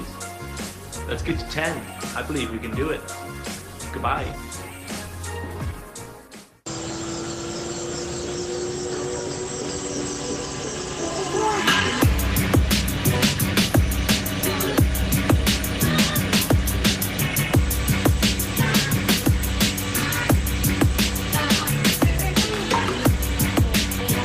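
Nothing stood out as a technical fault on listening.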